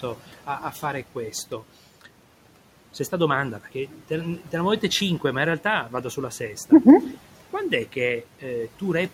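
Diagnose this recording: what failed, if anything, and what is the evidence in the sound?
Noise suppressor artifacts throughout, in call processing: the room noise, about 19 dB below speech, drops about 12 dB in pauses and returns beneath speech.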